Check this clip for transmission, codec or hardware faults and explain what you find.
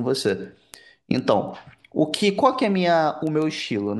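One hardware fault is present: word clock ticks. From 0.14 to 3.87 s, around thirty ticks repeat steadily about every 0.15 s. The receiving device's clock drifts against the sender's by roughly 150 ppm, so one sample is slipped at each crossing, producing a sharp tick.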